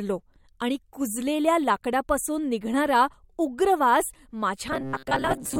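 From 4.72 s to 5.59 s, the speech turns into robotic sound from repeated short buffers. It becomes a rigid, metallic buzz near 134 Hz. The likely cause is audio arriving too seldom, so a chunk of about 7.5 ms was looped. Roughly half the sound is repeats.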